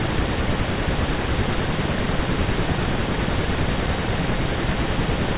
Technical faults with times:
none

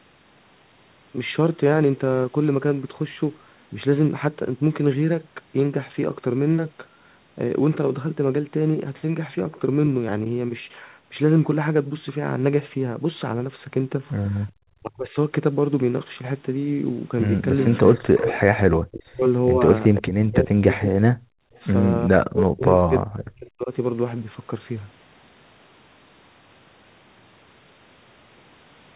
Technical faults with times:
14.47-14.52 echo leak
14.79-15.17 speech suppressed in double talk
17.61-18.40 echo leak
17.96-18.21 speech suppressed in double talk
18.84-20.96 speech suppressed in double talk
21.24-21.53 background gated by the echo canceller
21.53-21.60 echo leak
22.06-23.71 speech suppressed in double talk

